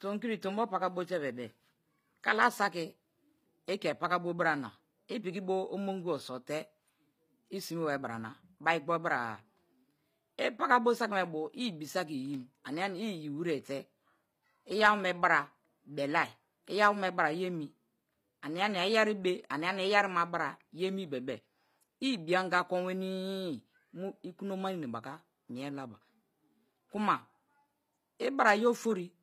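Right through the clip the speech carries HE-AAC compression damage: the treble above the core band is likely rebuilt by band replication, so s sounds come out gritty and metallic, and nothing survives past 15.5 kHz.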